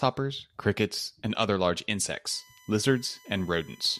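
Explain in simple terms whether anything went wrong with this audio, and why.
USB whine starts at 2.30 s, just after "crickets and other large", and lasts to the end: a faint, steady, high-pitched tone under the speech. The USB connection draws power in bursts a thousand times a second, and that leaks in as a 1 kHz whine, strongest at 2 kHz.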